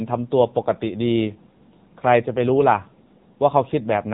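From start to end, the speech carries AMR narrowband mobile codec damage, and it is heavy. Nothing above 3.8 kHz survives, so sibilants lose their hiss and the sound turns thin and boxed-in. The codec rebuilds the voice from a vocal-tract model fed by sparse pulses. At this low rate, which fits an AMR-NB mode near 6.7 kbps, too few bits reach each frame. The result is buzzy and synthetic throughout.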